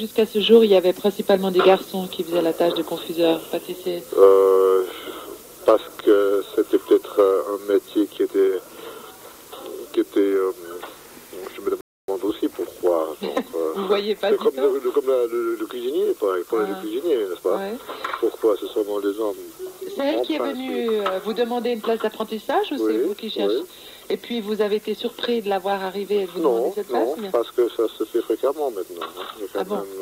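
At 11.81 s a playback stall cuts the sound off mid-flow, leaving about 270 ms of silence until output returns at 12.08 s. The likely cause is the player running short of data or its thread being blocked, starving the output until it recovered.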